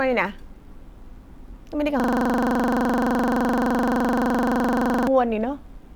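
From 2.00 to 5.08 s the speech freezes into a system hang loop. The same 42.67 ms slice, which fits a 2048-sample ring buffer, repeats exactly at 23.4 Hz as a rapid stutter. Unlike an underrun glitch, the repeated piece never changes or advances.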